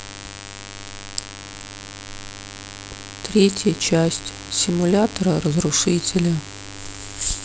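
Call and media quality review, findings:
Mains buzz across the whole speech clip: steady raspy buzz sitting fairly loud, roughly 15 dB under the talker. 50 Hz base with spiky harmonics up into the kHz range. Points to a dimmer, rectifier or unshielded run coupling switching spikes twice per mains cycle.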